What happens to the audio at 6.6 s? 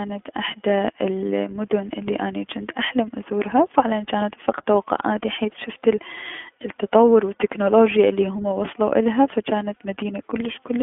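At 6.6 s the speech is passing through the iLBC codec, as it is for the whole clip. Nothing above about 3.6 kHz survives, and the line band of roughly 200 Hz to 3.4 kHz leaves it thin and telephone-like. Each short frame's excitation is coded on its own without drawing on the previous one, which fits 20 ms frames at 15.2 kbps, so the speech has a plainly audible rough, synthetic edge.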